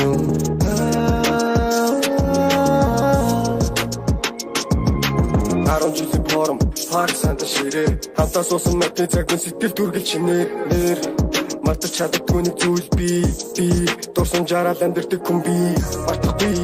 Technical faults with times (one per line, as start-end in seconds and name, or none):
none